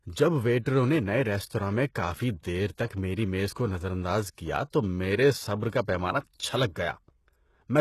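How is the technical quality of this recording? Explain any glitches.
The quality is noticeably compromised: the whole speech clip carries plainly audible codec damage, plus three small pre-echo smears.

Throughout, the treble sounds synthetic, with a gritty, lispy edge on s sounds and nothing above 12.3 kHz. That's likely HE-AAC compression at a low rate, fitting roughly 16 kbps, where upper bands are copied up from lower ones instead of coded, so harmonics don't line up.

Pre-echo shows up at 0.65 s, 3.54–3.56 s and 5.69–5.73 s, smearing 12, 27 and 31 ms ahead of sharp attacks. The codec spreads block-wide quantisation noise into the quiet gap before each onset, so you hear a brief hiss and a softened attack.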